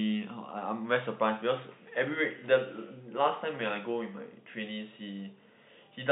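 No technical faults are audible anywhere in the speech.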